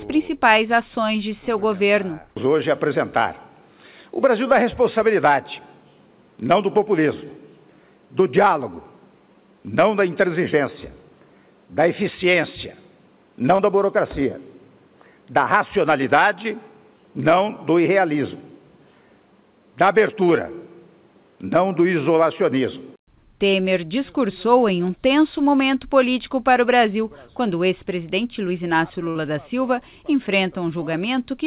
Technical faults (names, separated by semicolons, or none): short concealed packet loss